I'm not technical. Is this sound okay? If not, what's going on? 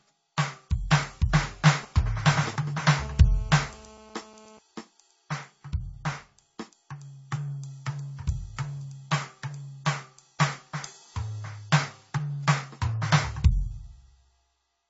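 No. The music is dull throughout. Nothing is left above 7.6 kHz, so the sparkle and air are missing, and there is a smeary, warbling roughness. This is likely transcoding between lossy codecs: the music was squeezed by one compressed format and then squeezed again by another, and each pass added its own damage.

From 1.83 to 2.94 s there are GSM signalling bursts. A nearby mobile phone was checking in with its network, and the audio wiring picked up its radio pulses. You hear a galloping dit-dit-dit of short buzzes.

From 3.01 to 4.59 s a phone causes GSM phone buzz, this time a steady call signal. It is a harsh, raspy drone at 217 Hz, quieter than the music. It has nothing to do with the music itself.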